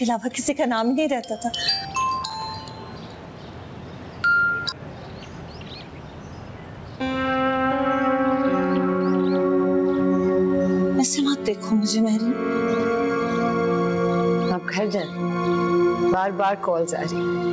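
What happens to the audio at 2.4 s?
Processor overload crackle runs from 2.23 to 2.42 s, ending right around the moment asked about. The processing couldn't finish its small audio buffers on time, and several deadlines in a row were missed. Each miss dropped a short stretch to silence with hard edges, so the sound breaks into a brief gritty crackle. The spacing suggests buffers of roughly 5 ms, with a handful lost over that span.

Gain pumping is also present at this point, as it is across the whole clip. The level swings by about 15 dB. Loud and soft parts end up closer in level, giving a squashed result. The likely cause is gain set far too high at the microphone, with a fast limiter or compressor pulling it back down on every peak.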